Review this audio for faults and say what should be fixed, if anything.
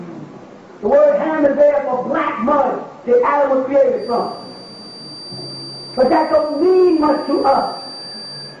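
Feedback whistle from 3.94 s to the end: a thin, steady 4.7 kHz tone sits around 20 dB below the sound and swells and fades slowly in level. It is likely a loudspeaker-to-microphone loop held just at the edge of feedback, sustaining one frequency without running away. To prevent it, reduce monitor gain or move the microphone out of the speaker's path, and notch out 4.7 kHz.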